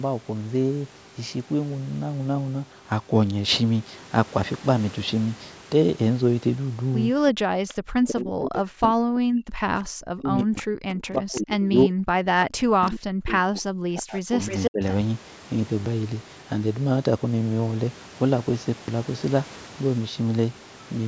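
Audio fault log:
7.45–12.31 s, 12.62–14.38 s and 14.7–14.82 s, speech suppressed in double talk: The talker's level repeatedly sinks, at its deepest by about 40 dB (about 35 dB in the brief last dip), so stretches turn faint, dull or drop out in pieces, around four seconds in the first span and one and a half in the second. This is likely an echo canceller that could not separate the local talker from loudspeaker echo while both sides spoke and turned everything down.
7.68–7.74 s, 10.57–10.63 s, 11.35–11.4 s, 12.86–12.91 s and 14.44–14.71 s, echo leak: Faint ghostly scraps of the voice trail in, mostly about 20 to 25 dB below the speech. The last one, more than a quarter second long, arrives at roughly the same level as the speech. Each copy lags by 338 ms. The likely cause is a loudspeaker on the far end whose echo canceller let part of what its microphone picked up return down the line.
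15.8–15.86 s and 18.8–18.88 s, repeated buffer: Each spot gives a short stuttering buzz, with a 20 ms slice played three extra times at the first and four at the second, and a hard join at every repeat. Roughly 70 ms of fresh audio is missing each time. New audio failed to arrive in time, so the player reused its last buffer instead of falling silent.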